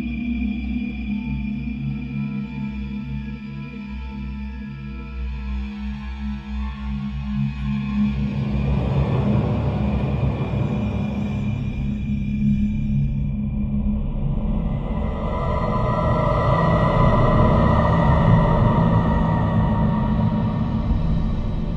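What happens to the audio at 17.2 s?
At 17.2 s the sound is a doubled audio track, and this runs through the whole clip. A second full-band copy trails the original by about one and a half seconds and sits roughly 5 dB lower. It has no decay or room colour, so it sounds like a plain repeat rather than an echo. The likely cause is the same audio being captured again through a slower path, or an edit leaving two copies out of step.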